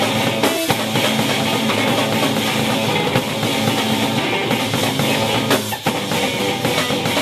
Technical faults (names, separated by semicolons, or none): compressed frames skipped